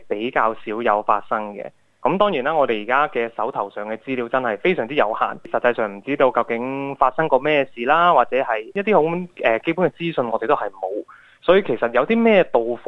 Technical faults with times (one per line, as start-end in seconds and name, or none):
none